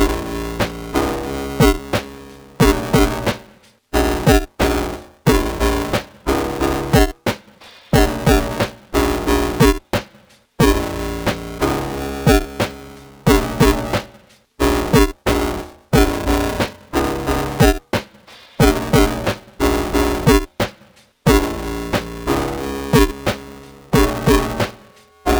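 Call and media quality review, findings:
Robotic buzz/rattle at about 345 Hz riding on all signal, whole clip, silent in gaps. Buffer tearing in the playback ring buffer: writer and hardware read pointer slipped, crossing mid-period. Roughly half of each buffer replays audio about 5 ms stale, hard joins both sides. Rate fits a 128-sample buffer.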